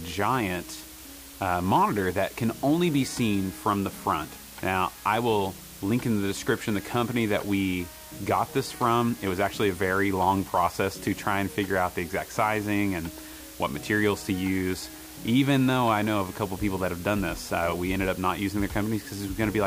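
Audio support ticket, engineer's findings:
Constant, even hiss across the whole clip, start to end. No crackle, no harshness, no distortion on loud passages. Hiss sits only around 20 dB under the signal. Probable component: low bit depth with dither at the conversion or export stage. Mechanism: signal reduced to 6 bits, dither added before rounding, so quantisation error becomes steady white noise instead of distortion. Noise floor is very high, as expected at 6-bit resolution.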